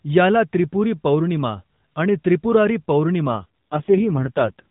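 A speech clip carried over the AMR narrowband mobile codec. From 3.28 s to 4.66 s, an AMR rate drop makes the voice rougher and more synthetic, with no gap and no band change. The sound fits a switch from 12.2 kbps to 4.75 kbps.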